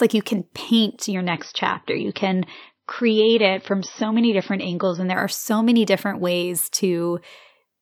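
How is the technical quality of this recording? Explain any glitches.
The recording has one glitch: a stretch where the stream drops to a lower bitrate. From 1.14 s to 5.14 s, between "like you can paint" and "are so many different", the adaptive stream switched to a lower-bitrate version, likely because the connection slowed. The sound loses everything above 6.1 kHz, which points to a move from around 128 kbit/s MP3 to under 30 kbit/s. Unlike a dropout, there is no gap, only a sudden fall in quality and a sudden return.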